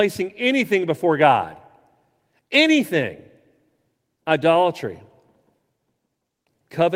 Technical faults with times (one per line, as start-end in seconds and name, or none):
none